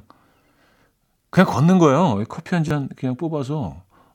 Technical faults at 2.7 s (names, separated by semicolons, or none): repeated buffer